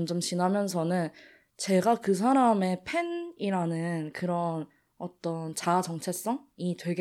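Nothing in the speech here gives a listener anything to flag, so there are no technical faults to walk through.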